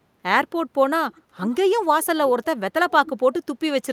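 Echo leak appears three times, at 1.15 to 1.21 s, 1.50 to 1.57 s and 2.90 to 3.10 s: a faint, delayed copy of the speech returning about 0.55 s late. It likely comes from a far-end loudspeaker whose echo canceller let part of its microphone pickup through. The first two scraps sit far below the speech, about 35 and 30 dB down. The last is much stronger, roughly 20 dB down.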